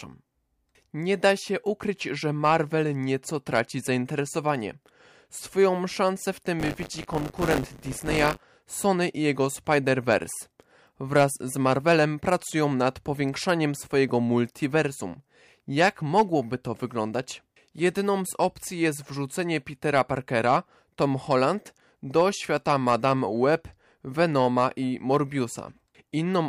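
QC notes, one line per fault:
6.59–8.44 s, buffer tearing: writer and reader cross every period, so a small slice of each buffer replays audio from a few tens of milliseconds earlier, giving a robotic 100 Hz rattle. The waveform shows hard joins every 10 ms, and the spectrogram shows regular vertical striations.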